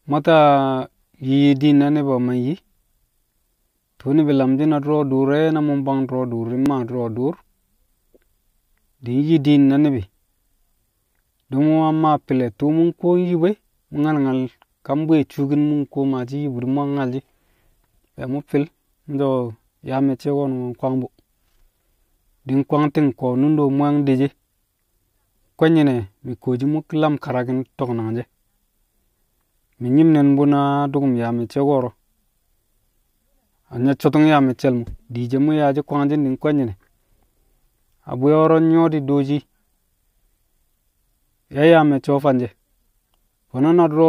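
Speech, with one jump at 6.66 s where the sound skips ahead with no gap of silence, likely a dropped buffer (overrun) that discarded about 1.5 milliseconds. An underrun or dropout would insert a brief silence instead of this skip.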